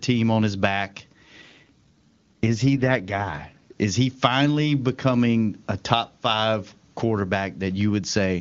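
An AMR rate drop runs from 1.41 to 3.72 s, starting just after "on his back". The link weakens, so the wideband codec falls to a lower mode and spends bits on protection. The band stays intact with no gap, but the speech turns rough and synthetic, which fits a drop from 23.85 to 8.85 kbit/s.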